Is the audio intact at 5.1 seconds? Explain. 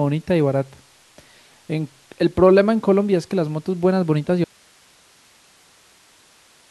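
No. At 5.1 seconds the clip is inside an audio dropout to a faint residue that runs from 4.44 s to the end. The wanted signal was most likely lost upstream while the rest of the path stayed live, so the speech cuts out abruptly in mid-flow rather than pausing or fading. What remains in the gap is only hiss, sitting roughly 35 dB below the level the speech had.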